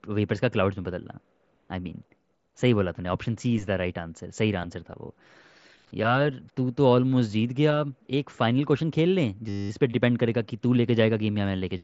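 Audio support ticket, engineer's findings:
Steady 100 Hz buzz replacing speech at 9.49–9.70 s. System hang loop: the host or driver stalled while the output hardware kept replaying one 10 ms ring-buffer segment, 21 repeats. Almost no audio lost, which points to a brief stall. Path runs through the Bluetooth mSBC headset codec, band-limited near 8 kHz.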